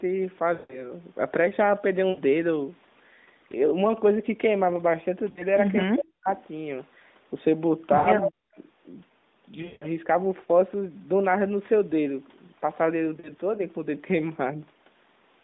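Lost AMR speech frames interrupt this narrowband phone-call speech, which is confined to roughly 200 Hz to 3.7 kHz, at 0.54–0.92 s, 2.10–2.21 s, 5.30–5.44 s, 7.98–8.09 s, 9.62–9.85 s and 13.20–13.29 s. Corrupted frames were discarded, and the decoder stretched the last good pitch and spectral shape with decaying gain, so the gaps of 40 to 180 ms smear, warble and fade toward silence. Speech suppressed in double talk appears at 5.85–6.34 s and 8.19–8.58 s, with the voice dropping by roughly 40 dB, likely because the echo canceller mistook simultaneous talk from both ends for loudspeaker echo and attenuated the near talker along with it. An echo leak follows at 6.38–6.44 s: a faint, brief copy of the voice returns about 245 ms late and sits far below the speech, likely residue from a loudspeaker path that the echo canceller did not fully remove.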